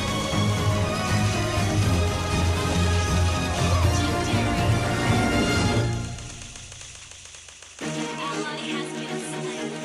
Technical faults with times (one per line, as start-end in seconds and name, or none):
none